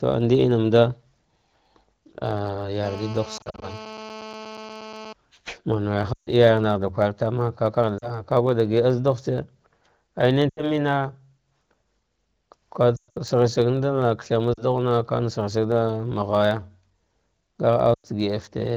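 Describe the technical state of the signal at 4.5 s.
At 4.5 s two faults overlap. The first is GSM phone buzz, running from 2.84 s to 5.13 s. A 2G handset nearby is on a call and transmits in bursts about 217 times a second. The audio circuitry rectifies those radio pulses into sound. The result is a hard, raspy buzz at 216.7 Hz, rich in harmonics and unrelated to the speech. It holds steady across the span. It sits about 16 dB below the speech.

The second is a block size mismatch (truncated), present through the whole clip. One stage hands over blocks slightly longer than the next stage reads. The tail of each block is discarded. Each cut leaves a small discontinuity, and these repeat at 91.9 Hz, giving a low buzz under the speech. The size difference is tiny, so playback runs at essentially normal speed and pitch. The wideband phone coding underneath stays clear.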